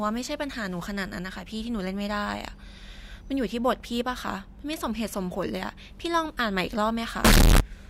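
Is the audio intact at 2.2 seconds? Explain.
Yes, the audio is intact at 2.2 seconds, with no dropout, click, distortion or other fault at that moment.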